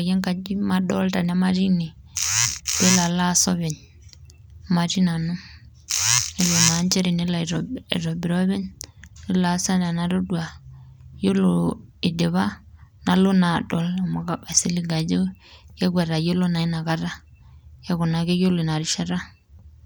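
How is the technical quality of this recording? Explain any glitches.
The technical quality of the recording is sound, with no glitches to explain.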